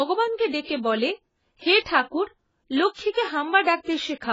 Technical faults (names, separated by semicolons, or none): AAC compression